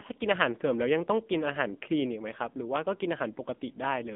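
AMR narrowband mobile codec damage runs through this speech clip from start to finish. The sound is confined to a telephone band of roughly 200 Hz to 3.6 kHz, with nothing at all above 3.7 kHz, because the codec samples at 8 kHz and rebuilds each 20 ms frame from a vocal-tract model excited by a few pulses. The plainly audible buzzy, synthetic edge points to one of AMR-NB's lower modes, near 8 kbps.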